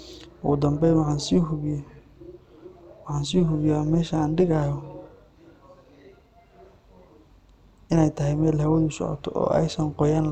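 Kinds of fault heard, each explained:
Overlap-add ripple: frames rejoined with overlap that doesn't sum flat, so speech level pulses about 6 dB at roughly 200 Hz throughout, giving a metallic buzz with extra tones around the voice.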